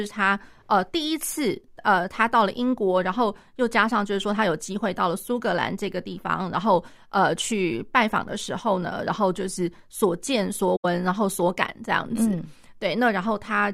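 At 10.76 s the speech drops into a soft-edged hole that lasts until 10.85 s. This is AAC frame loss with muting. Compressed frames failed to arrive, and the decoder filled them with silence instead of sound. The gap of about 85 ms fits a run of four lost frames. Because the frames overlap, the audio fades out into the gap and fades back in after it. There is no hard edge on either side.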